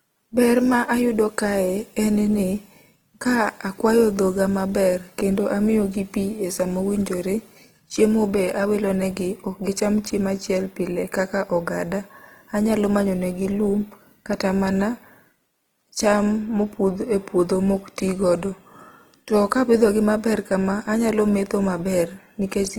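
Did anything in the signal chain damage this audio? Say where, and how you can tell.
Yes, at the codec stage, throughout the speech. It sounds plainly rough and grainy rather than swirly, with few spectral holes and content reaching about 20.2 kHz. Unlike MP3, this points to likely Opus compression in music mode near 16 kbps, noise-filling starved bands.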